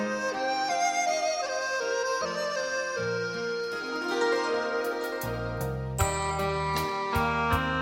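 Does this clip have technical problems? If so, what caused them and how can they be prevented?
No, nothing in this clip points to a technical fault, so there is no cause to trace and nothing to prevent.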